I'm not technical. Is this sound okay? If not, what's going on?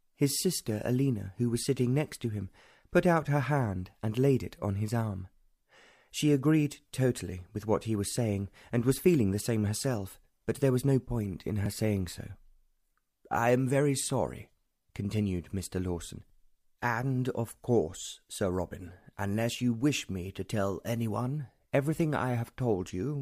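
No. At 11.66 s there is a tiny jump in the sound. This is a dropped buffer, also called an overrun. It likely happened because the recording program fell behind for a moment. The hardware then overwrote a small piece of audio before it was saved. Only a few thousandths of a second went missing. The two sides were joined directly, with no gap of silence between them.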